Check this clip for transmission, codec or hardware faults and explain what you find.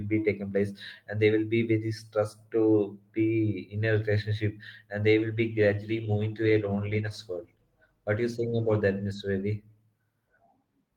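One transmission fault is present: a call bitrate drop affecting the speech from 5.19 s to 9.61 s. Between those points the call's bandwidth estimate fell and the encoder was told to spend far fewer bits, so the speech is coded more coarsely. The sound turns rougher and less detailed, staying at its worst for about 3.6 s before recovering, which fits a rate cut from roughly 32 kbps to 16 kbps.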